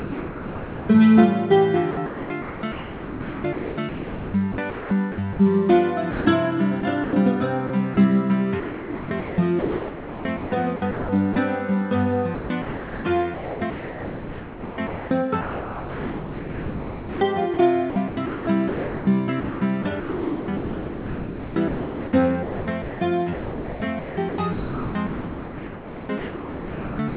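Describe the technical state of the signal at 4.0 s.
At 4.0 s the audio sits inside a choppy stretch from 1.91 s to 5.39 s. The likely cause is sound chopped by the voice detector. The sender's detector keeps toggling between sending and muting. Quieter parts get swapped for synthetic comfort noise, about 2.31 s of it across the stretch. The result sounds broken up. Everything is band-limited to 4 kHz by the call codec.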